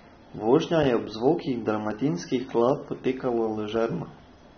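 Throughout the speech, a low-bitrate encoder has likely quantised the spectrum too coarsely: the damage is what AAC compression (AAC-LC) does when starved, and it fits a rate around 24 kbps. To save bits the coder has dropped everything above 6.3 kHz, so the sound is dull and muffled. Thinly coded bands leave a plainly audible warbling, fizzy texture, most noticeable on sibilants and sustained vowels, with transients smeared.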